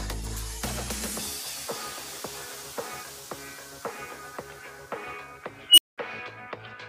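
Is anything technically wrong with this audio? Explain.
Yes. An unstable filter appears from 5.69 to 5.98 s: bad coefficients let a recursive filter's output grow unchecked. A tone near 3 kHz swells over 85 ms into clipping, then 200 ms of silence follows as it resets. Acoustic feedback howl builds more gradually and doesn't cut out.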